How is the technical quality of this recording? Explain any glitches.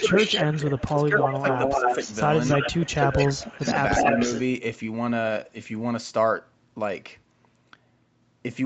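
The first four and a half seconds of this speech recording have clear call-path problems: a delayed echo of the voice and brief dips in the talker's level.

Echo leak: At 0.0–0.96, 1.17–2.15, 2.44–2.92 and 3.18–4.4 s, a second copy of the voice trails the first by roughly 270–290 ms. It is about as loud as the speech itself, or a little quieter around 2.4 s. This likely comes from a far-end speakerphone whose echo canceller let its microphone pickup return down the line.

Speech suppressed in double talk: The voice ducks at 0.96–1.45 s (down about 15 dB), briefly at 1.8–1.91 s (a slight dip) and at 3.06–3.17 s, then drops hard, by about 25 dB, at 3.33–3.77 s. Most of these dips overlap the echo. The likely cause is the canceller failing to separate talker from echo and attenuating both.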